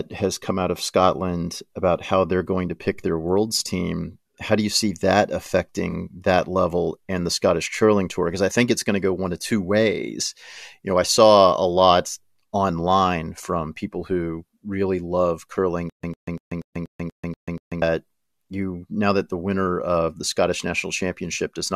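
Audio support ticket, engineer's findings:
Corrupt frame concealed, 5.90–5.94 s: bit errors in one AAC frame, caught by the decoder and covered over. About 40 ms, fitting a single damaged frame.

Stutter with silent gaps, 15.90–17.82 s: likely a player or stream stall, replaying the last fragment on each retry. A 102 ms burst repeats eight times every 240 ms, separated by 139 ms of digital silence; audio in that span lost.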